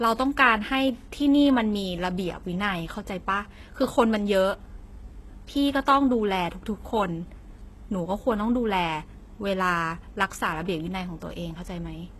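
Throughout, s sounds are gritty and lispy, yet treble up to 12.3 kHz stays bright rather than dull: likely HE-AAC compression, fitting about 16 kbps.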